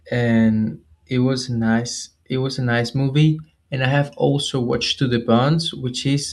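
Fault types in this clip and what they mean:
The speech carries no audible technical faults, with its high end reaching to around 12 kHz, consistent with a wideband call codec path operating as intended.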